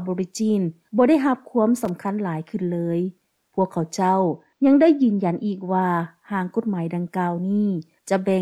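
From 1.76 to 1.89 s there is a burst of loose connector crackle, where a worn or dirty contact rapidly makes and breaks the signal path, chopping the audio into scratchy, irregular bursts. Its ragged, uneven texture sets it apart from the single clean tick of a digital click or dropout.

Between 4.24 and 5.82 s the sound turns dull from channel delay (comb filtering). One channel lags the other by only a couple of samples, roughly 0.05 ms, and summing them cancels energy in a fixed notch around 10 kHz. A smooth low-pass roll-off would behave differently.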